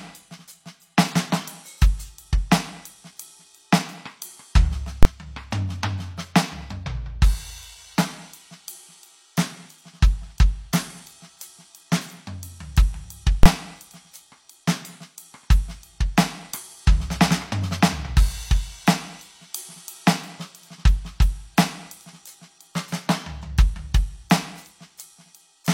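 At 5.03 to 5.05 s and again at 13.43 to 13.46 s, the music is interrupted by invalid numbers at full scale. In each case a calculation yielded infinite or invalid values, and the output was pinned at one extreme level, far beyond the music's peaks, for about 23 ms, which fits a 1024-sample processing block. A hold that short is heard as a single loud bang at each point.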